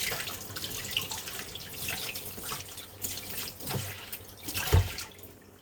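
From 1.55 s to the end there's a call bitrate drop: the bandwidth estimate sank and the encoder was squeezed hard, which fits a fall from around 128 kbps to about 23 kbps. The sound goes coarse and watery, and the top end gets lopped off, most heavily for about 2.1 s.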